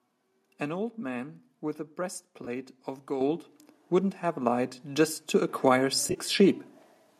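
At 2.45 to 2.48 s, AAC frame loss with concealment: about 20 ms of coded audio never reached the decoder, which fits two 10 ms frames, so the decoder rebuilt the gap from the last good spectrum instead of real data. The fill is too short to fade toward silence. It is heard as a brief smeared, noisy patch where the sound loses its crispness for an instant.

At 3.21 s the microphone volume was stepped up: the call software judged the input too quiet and raised the device gain in a single jump of about 7 dB. The sound and the background behind it both get louder at once. It is an abrupt level step, not a gradual rise.

From 6.07 to 6.18 s the AAC frame loss with concealment returns more heavily. About 60 ms of frames went missing, scattered across roughly 80 ms, with the longest unbroken gap around 30 ms. The decoder kept patching from stale spectral data, so this stretch sounds phasey, with a fluttering, broken texture as real and synthesised frames alternate. 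Underneath, a light roughness in the upper band is likely the low-delay AAC-ELD coding at 64 kbps.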